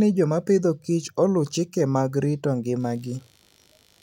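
It's a short speech clip, and from about 2.79 s, right after "oluw chike mag rito", a buzzy, rough computer activity noise comes in and runs to the end at 4.03 s. It pulses at around 70 times a second and sits well below the speech, roughly 35 dB down. That's the machine's own load changes (processor, graphics or mouse activity) disturbing the shared ground the audio circuit uses, so it follows the computer rather than the speech.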